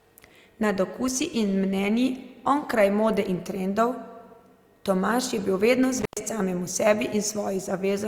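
Speech with one intermittent contact fault from 5.98 to 6.21 s, right after "je bil vedno". A loose cable or plug opens for about 115 ms, so the sound drops to faint hiss between crackles. On a waveform it shows as a flat gap with spiky edges, and on a spectrogram as a dark gap bracketed by broadband vertical streaks.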